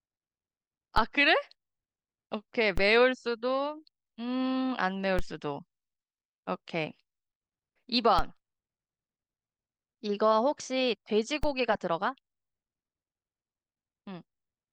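Speech with five DC steps, at 0.98, 2.78, 5.19, 8.19 and 11.43 s: the zero line jumps by about -20 to -18 dBFS, giving a low thump, then a 5 Hz high-pass drags it back. The waveform shows offset jumps; the spectrogram, thin low-frequency vertical streaks.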